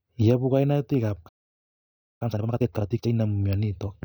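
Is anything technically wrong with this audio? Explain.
Yes, there are two faults. From 1.28 s to 2.22 s there is a playback stall: the speech cuts out mid-flow into roughly 0.92 s of silence. The likely cause is the player running short of buffered data or its output thread being blocked, so nothing reached the output until it recovered.

From 2.22 s to 3.12 s comes time-compressed catch-up. The player works off the backlog built up during the stall by dropping short segments and cross-fading the remainder, playing at twice normal speed. The speech sounds rushed but keeps its pitch.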